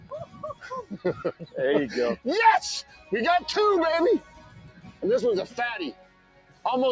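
A noise suppressor designed for speech was left running across the whole clip, and it keeps treating sustained parts of the sound as noise to be removed. The result is a level that swings by something like 15 dB as the suppressor clamps down and lets go, so the audio pumps and thins wherever a sound holds or fades, while sharper onsets slip through largely intact.

The clearest cases of sound cut by the noise suppressor come in six stretches. From 0.00 to 0.66 s it pulls the sound down by about 13 dB for much of that span. From 0.83 to 1.05 s the dip reaches about 12 dB, and from 1.31 to 1.55 s about 13 dB. A milder cut of about 10 dB follows from 2.83 to 3.12 s. The longest and deepest come last: 4.20 to 5.03 s, sinking about 14 dB for most of that window, and 5.92 to 6.65 s, down about 15 dB. In each, held material and decaying tails collapse early. The call's microphone path, with nothing above 8 kHz, is ordinary band-limiting rather than part of the fault.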